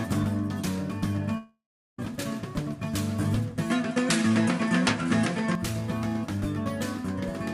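The audio breaks off from 1.37 to 1.99 s: the last sound smears into a fading buzz, then about 0.37 s of silence, with roughly 0.61 s lost, likely a long network dropout. From 3.70 to 5.55 s the sound turns duller, with nothing above 11.4 kHz, a level shift of around 5 dB and a faint new noise floor, and no gap at the change, pointing to the input likely being switched to a poorer device.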